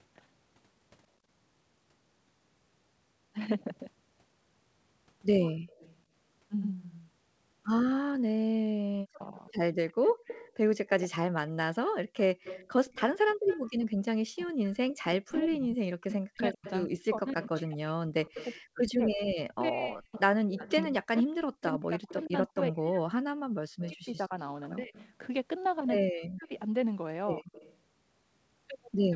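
At 5.46 to 5.98 s a faint echo leak appears: a copy of the speech trailing by 113 ms at about 25 dB below it, most likely from a loudspeaker whose echo canceller missed part of the pickup. On a spectrogram it shows as a weak shadow of each syllable shifted right.

From 6.62 to 9.48 s the audio plays as a doubled audio track. A second, full-band copy sits roughly 100 ms behind at about the same level, likely captured twice by a slower path. It starts and stops abruptly, with no reverberant tail. The waveform shows every onset repeated at a fixed offset.

Inside that stretch, at 8.63 to 9.36 s, comes speech suppressed in double talk. For roughly 0.7 s the level dips by up to about 40 dB and thins, likely because the canceller turned everything down while both sides spoke. The spectrogram shows the upper bands fading and gaps.

From 9.89 s to the end the echo leak returns and stays, still 113 ms late but stronger, about 15 dB under the speech. 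On the spectrogram a fainter duplicate of each harmonic stack follows just behind the original.

Two brief holes appear in the room sound at 10.14 to 10.25 s and 13.34 to 13.46 s, each about 100 ms long. The background, gated by the echo canceller, drops by about 23 dB and then about 34 dB before springing back. The waveform shows the noise floor notching sharply down at these points.

From 14.29 s to the end, speech suppressed in double talk recurs in pieces, with drops of up to about 40 dB that chop and dull the voice, likely from continued overlap with the far side. Ragged, uneven envelope cuts and blanked upper bands mark it.

Throughout, content above 8 kHz is absent, consistent with a G.722 call path at 64 kbps.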